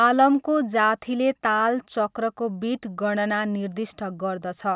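Speech recording with no audible technical faults.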